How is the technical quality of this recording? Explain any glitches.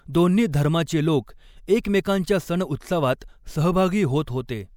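There is one glitch, a pre-echo at about 3.2 s. The codec spread its quantisation noise across the whole transform block, so noise meant for a sharp attack leaks about 17 ms ahead of it, heard as a brief hiss that softens and smears the onset.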